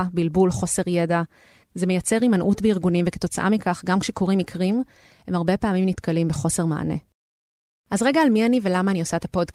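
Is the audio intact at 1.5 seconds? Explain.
Yes, the audio at 1.5 seconds is intact, with no fault present at that moment.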